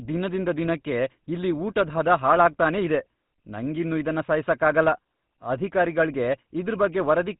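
From start to end, the speech carries GSM full-rate codec damage, which fits a 13 kbps rate. Pulse-driven vocal-tract coding sounds buzzy and gravelly, and a spectrogram shows nothing above 4 kHz.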